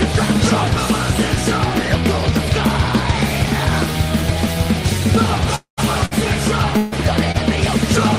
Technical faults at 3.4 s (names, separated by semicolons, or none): none